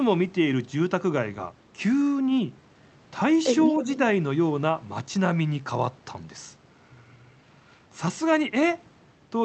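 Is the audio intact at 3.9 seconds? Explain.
No. From 3.79 to 3.94 s there is an echo leak. A faint, delayed copy of the speech sits under the live sound, trailing it by about 311 ms. It is quiet, roughly 15 dB below the speech, and brief. The likely cause is a far-end loudspeaker whose echo canceller let part of the microphone pickup through. That residue travelled back down the call, so the speech is heard again a moment later.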